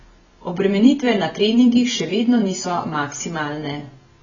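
A speech clip with heavy AAC compression damage running throughout. Nothing is heard above about 7.1 kHz, so the top end is simply missing and the sound is dull. The likely cause is AAC-LC coding at a very low bitrate, which fits something near 18 kbps. At that rate the encoder discards high bands and quantises the rest coarsely. The result is smearing, with a warbling, fizzy texture on sustained sounds and sibilants.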